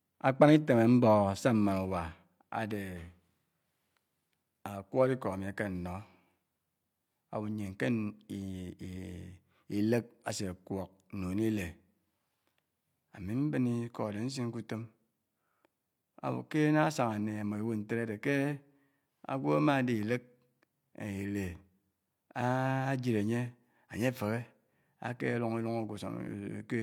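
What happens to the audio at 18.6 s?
At 18.6 s the speech carries on intact, with no dropout, click, distortion or other fault at that point.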